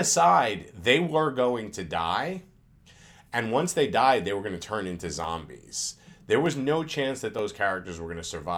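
Three sharp, isolated clicks cut through this speech clip, at 5.24 s just after "going to turn into", at 6.46 s just before "no chance that", and at 7.39 s just after it. These are likely dropped samples, each losing well under a millisecond, so the waveform jumps abruptly without removing audible sound.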